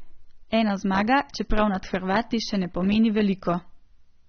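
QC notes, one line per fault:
Throughout: AAC compression, likely from AAC-LC at a low bitrate, somewhere around 27 kbps. Nothing survives above about 6.3 kHz, so the speech sounds dull and muffled, and the coarse quantisation leaves a warbly, fizzy smear on sibilants.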